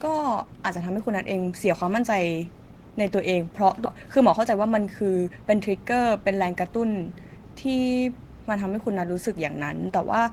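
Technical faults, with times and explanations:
3.85–3.87 s, skip ahead: The speech jumps forward with no silence at the join, and roughly seven tenths of a second of speech never plays. That stretch was thrown away, either lost in transit or discarded when the jitter buffer overflowed while later audio was already queued. Playback resumed at the newer audio, so the two sides of the gap sit directly against each other. The speech sounds abruptly cut, and the listener's delay drops by about the same amount.
3.95–5.45 s, jitter buffer speed-up: Over these one and a half seconds the speech runs at about 110% of normal speed without any change in pitch, so it sounds rushed. The receiver was still holding more audio than its target, so it drained the excess by repeatedly cutting out short slices one or a few pitch periods long. Together these removals take out roughly 150 ms, which shortens the syllables and speeds up the delivery until the buffer returns to its normal depth.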